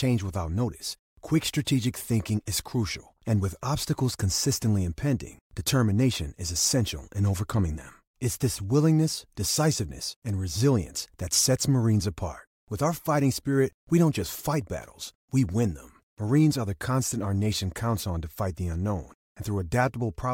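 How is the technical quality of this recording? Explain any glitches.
No audible glitches anywhere; the recording is technically sound.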